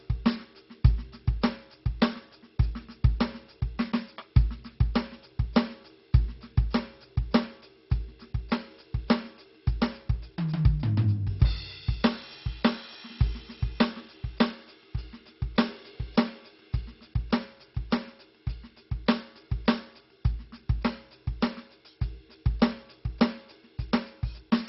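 From start to finish the music has likely been through MP2 compression at a very low bitrate, the sort of damage that points to something near 32 kbps. With so few bits, the Layer II encoder shuts off its upper sub-bands entirely, leaving nothing above 5.6 kHz, and quantises the remaining bands coarsely. The damage is heavy: the music sounds dull, with a gurgling, granular distortion as bands flicker in and out.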